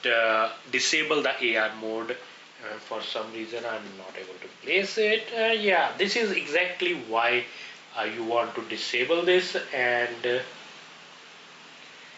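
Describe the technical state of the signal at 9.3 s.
At 9.3 s the signal shows gain pumping, present across the whole clip. The gain swings by about 5 dB, leaving the sound squashed, likely from a gain set too high with a fast limiter pulling it down. On the waveform the envelope looks flattened, with the noise floor rising between peaks. On a spectrogram, content stops at 8 kHz from the call path.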